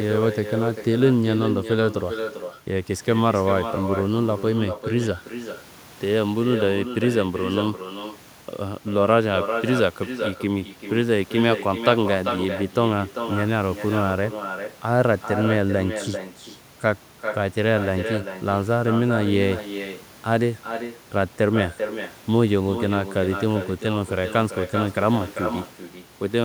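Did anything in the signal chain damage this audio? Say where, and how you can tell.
Yes, and it's a call-processing problem: echo with no canceller, running through the whole clip. Every phrase of the speech gets a second, quieter copy trailing it by roughly 0.4 s, sitting about 8 dB down, and it sounds thinner than the direct voice. That's the far end's loudspeaker feeding its own microphone, with nothing on that end subtracting it, so the sound comes back after the network round trip.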